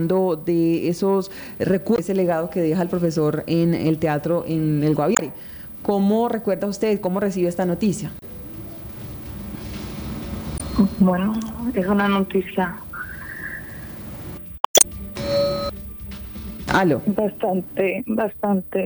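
At 1.95 to 1.99 s, 5.14 to 5.21 s, 8.19 to 8.23 s, 10.57 to 10.61 s and 14.56 to 14.85 s, damaged data in the compressed stream produces brief glitches. At each point the decoder hits corrupt bytes, misreads or discards those frames and loses sync until it finds the next valid frame header. The last event is the longest, at nearly 0.3 s.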